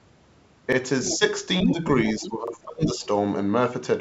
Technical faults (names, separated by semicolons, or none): repeated buffer; other side's voice leaking through; speech suppressed in double talk